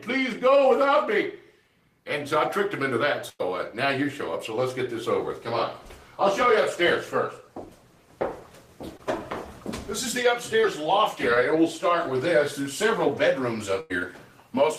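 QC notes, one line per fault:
3.29–3.41 s, burst of packet loss: about 100 ms never arrived; the last sound is stretched and faded, then audio jumps ahead. Spectrogram shows smeared, decaying bands, then an abrupt restart.
8.97–9.01 s, short concealed packet loss: 20 ms lost, patched by extending the preceding sound, heard as a brief smear; a thin blurred sliver in the spectrogram.
10.61–10.64 s, short concealed packet loss: 20 ms lost and filled with a continuation of the previous sound, heard as a tiny wobble.
11.34–11.38 s, short concealed packet loss: 20 ms gap concealed by repeating the prior sound and blending back, a quick smear; a narrow vertical blur appears in the spectrogram.
13.80–13.92 s, burst of packet loss: about 100 ms dropped; the receiver holds and fades the last sound before resuming later. Waveform envelope decays, then jumps back abruptly.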